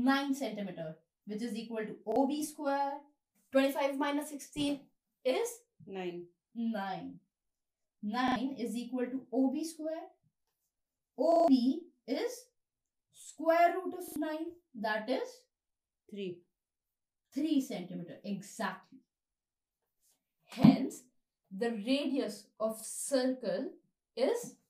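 Repeated buffer at 2.12, 8.28, 11.32, 14.08 and 22.8 s: late audio made playback loop the last block, which fits a 40 ms buffer, giving hard-edged stutters, longest at 11.32 s.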